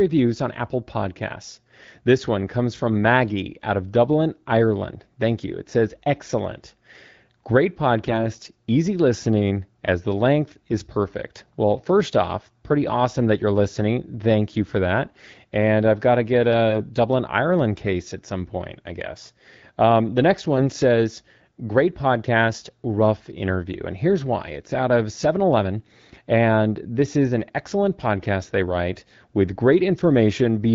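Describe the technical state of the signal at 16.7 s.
Right after "I've got to get", from 16.7 to 16.79 s, there's a burst of AMR bit errors. That span fits about three frames where around 5 percent of the weakly protected bits flipped while the checksum still passed. The decoder used them, misplacing excitation pulses, so the voice keeps its pitch and level but goes briefly hoarse and gargly over the 12.65 kbit/s AMR-WB coding.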